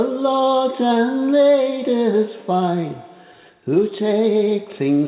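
No technical faults can be heard anywhere in the audio. It has the narrowband sound of a call path, with nothing above about 4 kHz, which fits a G.711 mu-law codec at 64 kbps.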